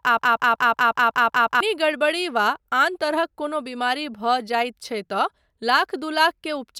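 The clip is speech, and it opens already stuck in a broken-record loop: from the very start to about 1.6 s, a fragment of roughly 185 ms plays back to back, eight times over, with nothing new getting through. That exact repetition is likely the player, encoder or stream stalling and re-sending the last piece it had buffered, so whatever should have been heard in that first stretch is simply gone.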